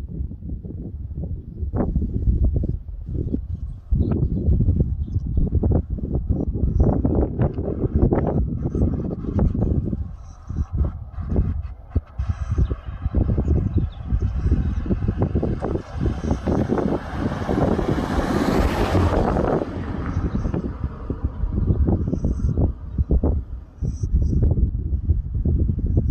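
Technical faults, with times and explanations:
1.72 s, stream segment skipped: the sound abruptly jumps ahead with a small blip, likely because one stream segment failed to load and playback resumed at the next.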